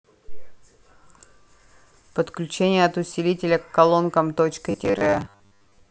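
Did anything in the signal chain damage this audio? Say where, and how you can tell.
Yes. Robotic sound from repeated short buffers appears from 4.71 to 5.90 s, most likely at the driver or buffer stage. The speech there becomes a rigid, metallic buzz with a fixed pitch of 100 Hz that only loosely tracks the words, which fits a 10 ms chunk being replayed whenever fresh audio fails to arrive in time. Roughly half of the material in that stretch is repeats, with the real audio skipped.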